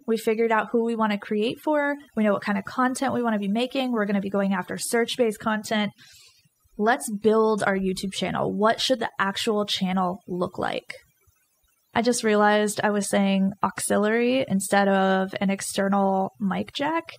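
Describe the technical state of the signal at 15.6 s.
At 15.6 s the background drops and breaks up into twinkling, chirpy specks. This is overdone noise removal, present throughout the clip: an over-aggressive noise reducer is shutting off individual frequency bands near its noise estimate, taking quiet parts of the speech with them.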